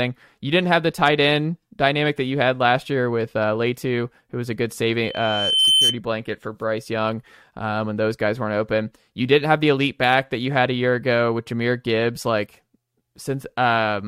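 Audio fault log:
5.03–6.00 s, loudspeaker feedback squeal: the microphone picks up the loudspeaker it feeds and loop gain exceeds unity at 3.1 kHz, so after "who was a good" a pure tone swells over most of a second to about 5 dB above the speech, ending before "blanket for".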